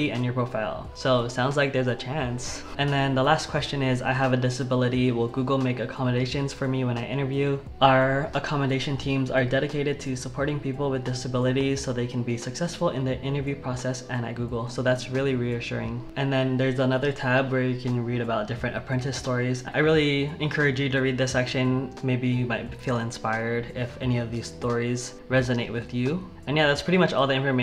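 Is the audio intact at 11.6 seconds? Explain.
No. A sudden voltage pulse, likely from a plug, switch, static discharge or driver glitch, entered the signal path and was shaped by the following circuitry. From 11.61 to 11.63 s this produces a single loud pop, peaking roughly 5 dB above the surrounding sound, which continues underneath.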